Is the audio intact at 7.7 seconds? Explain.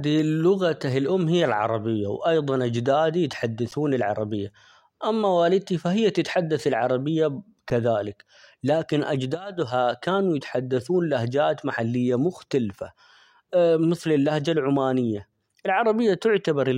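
No. At 7.7 s, an underrun with held sample: the buffer emptied and the converter held its last value, a flat 10 ms waveform segment, and roughly 10 ms of audio was skipped.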